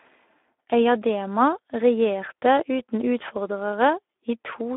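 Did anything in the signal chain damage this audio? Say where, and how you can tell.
Yes. Speex codec damage runs through the whole speech clip at the codec stage: hoarse, noisy excitation within a 300 Hz to 3.5 kHz telephone band, which fits a mid-low setting near 11 kbps. Plain band-limiting would stay clean, and transform codecs swirl rather than rasp.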